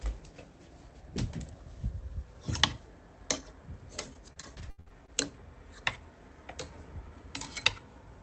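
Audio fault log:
4.13–5.10 s, repeated packet loss (robotic sound): eight dropouts in under a second, the longest around 78 ms, roughly a quarter of the stretch. Each hole gets patched by stretching the last bit of sound, so it turns choppy with pieces missing.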